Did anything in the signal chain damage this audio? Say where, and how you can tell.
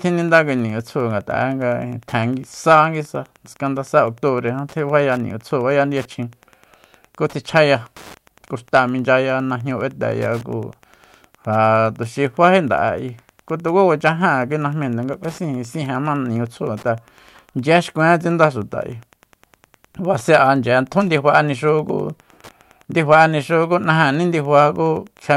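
Yes. It's Wi-Fi interference, and it gets in at the analogue wiring stage. Under the speech for the whole clip there's a faint, steady tick about ten times a second, spaced 102.4 ms apart, sitting roughly 35 dB below the voice. That spacing is the giveaway: it's a nearby Wi-Fi radio's beacon interval. The analogue circuit picks up those RF bursts and rectifies them into audible clicks, so what you're hearing is the radio's timing.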